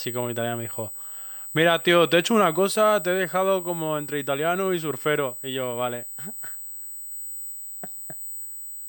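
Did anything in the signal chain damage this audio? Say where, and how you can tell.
Yes. A steady, fixed-pitch USB whine at 8 kHz, strongest at 16 kHz and only about 10 dB below the speech, runs throughout; microframe current is leaking through shared power or ground wiring.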